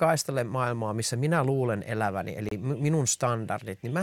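A speech clip with one fault: a Bluetooth stall from 2.49 to 2.51 s, right after "missä minä luulen eläväni", where the sound drops to about 28 ms of silence and then resumes, likely because the headphones' buffer ran dry while delayed packets were resent. Unlike a concealed packet loss, nothing is smeared or filled in.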